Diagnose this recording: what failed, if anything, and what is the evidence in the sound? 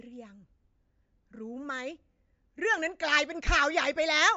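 Throughout, the speech sounds watery, with nothing above 7.6 kHz. This is likely MP3 compression: a bit-starved codec cuts treble and drops weak lines, which fits about 48 kbps.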